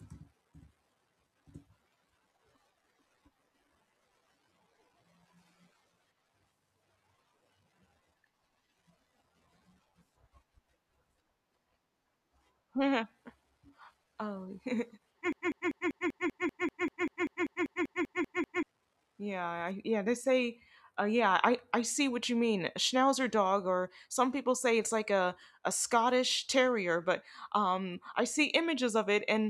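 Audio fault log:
15.33–18.63 s, broken-record loop: A 0.19 s fragment of speech repeats exactly, back to back, 17 times. The speech that should fill those 3.3 seconds is lost. The player or stream likely stalled and kept resending its last held fragment.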